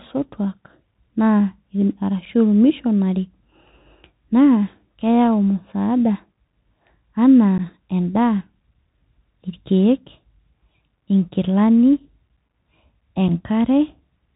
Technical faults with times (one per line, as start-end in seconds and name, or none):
0.00-14.36 Bluetooth CVSD headset codec
2.25-2.27 unconcealed Bluetooth headset packet loss
7.58 unconcealed Bluetooth headset packet loss
13.28 unconcealed Bluetooth headset packet loss